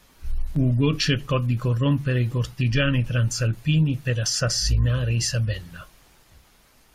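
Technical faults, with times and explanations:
0.56 s, overlap between stream segments: a tiny skip in the speech as about 15 ms vanishes where two segments' timestamps overlap and the player trims real audio.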